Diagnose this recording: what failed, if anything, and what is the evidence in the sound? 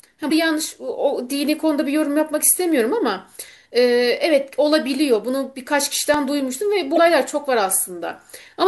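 At the codec stage, damaged data in the compressed stream threw the decoder off frame sync, producing brief glitches at 0.28–0.32 s and 6.94–6.98 s.

During disc playback, a scratch defeated the error correction on successive turns of the disc, leaving three CD scratch ticks, each under a millisecond, between 5.87 and 6.41 s.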